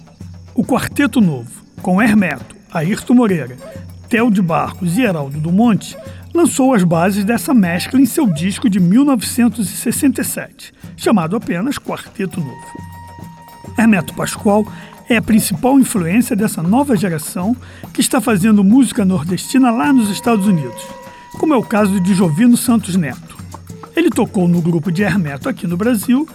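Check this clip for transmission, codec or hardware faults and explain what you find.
Two sharp clicks stand out, at 2.31 s and 5.11 s, and each is most likely from dropped samples. At each point a fraction of a millisecond of the stream seems to be missing, so the waveform steps abruptly from one value to a later one instead of continuing smoothly. Far too little is lost to remove any audible sound; what remains is a brief tick. On a spectrogram each shows as a thin vertical line spanning the frequency range, and the waveform shows a discontinuity.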